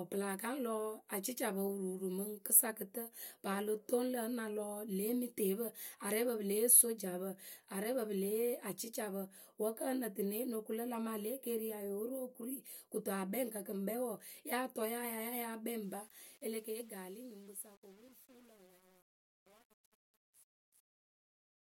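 From 15.83 s to the end at 21.78 s, the speech's fade-out picks up truncation distortion on a fade. The level stage keeps too few bits, which fits roughly 9-bit resolution, with no dither. So the tail turns gritty.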